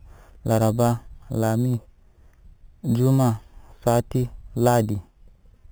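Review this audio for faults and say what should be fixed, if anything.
Imaging from sample-and-hold upsampling runs throughout the speech. Each sample was simply repeated to reach the higher rate, with no smoothing filter, so mirror copies of the spectrum sit above the original band. The lowest copy fills about 4 to 8 kHz at roughly 21 dB below the speech. It is heard as a metallic fizz that tracks the speech level and moves against its pitch, which fits an 8 kHz source raised to 48 kHz. To prevent it, upsample with a proper interpolating low-pass filter rather than sample repetition.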